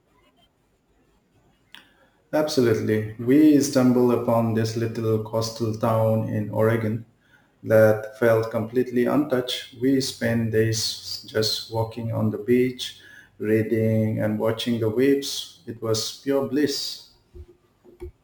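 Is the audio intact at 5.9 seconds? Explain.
No, crude rate conversion runs throughout, including 5.9 s. Samples are repeated without filtering, likely from 32 kHz to 44.1 kHz, leaving gritty inharmonic fizz about 25 dB below the speech.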